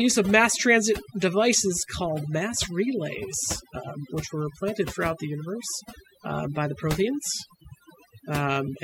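From start to finish, the speech carries overdone noise removal. A noise reduction stage was pushed too hard on a noisy recording. It cut individual frequency bands right down whenever they came close to its noise estimate. Softer parts of the voice fell below that line and were removed too. The background in the gaps between phrases drops away, scattered with small twinkling specks.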